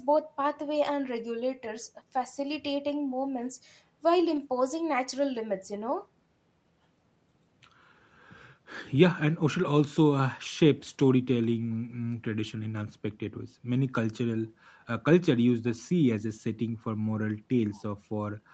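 Speech carried over a call path lost packets at 2.19–2.21 s, at 4.35 s, and again at 14.29–14.35 s, where the 40 ms rough stretch fits two separate lost packets. Each gap was a lost packet rebuilt from error correction: the following packet carried a low-bitrate backup copy, and the decoder played that instead of leaving silence. So nothing drops out, but each short patch sounds coarser and noisier than the Opus audio around it, which is already limited to 8 kHz.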